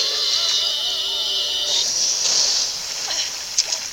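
From start to finish, the audio has most likely been reduced to about 7 bits by plain rounding with no dither, which leaves low bit depth without dither across the whole clip. With so few steps, the rounding error tracks the waveform. It sits only around 25 dB below the signal, so a grainy, rasping distortion changes with the sound. Quiet passages turn gritty.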